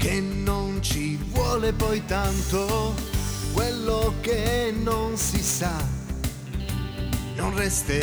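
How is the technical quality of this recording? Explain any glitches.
The recording has a clock fault. From 1.15 s to 7.33 s there is sample clock jitter: the converter's timing wanders by around 10 microseconds, so each sample lands slightly off. Fast-changing, loud passages suffer most, leaving a grainy hiss only about 20 dB below the sound. Unlike steady background noise, it disappears whenever the audio goes quiet.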